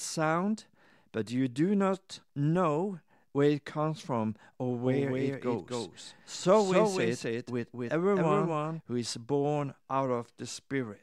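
Speech, with a doubled audio track from 4.85 to 8.81 s, after "it comes from or" and ending before "who is born": a second full-band copy trails by about 300 ms, roughly 5 dB quieter, likely from a slower capture path. Unlike room echo, it has no decay or reverberant colour and cuts in and out abruptly.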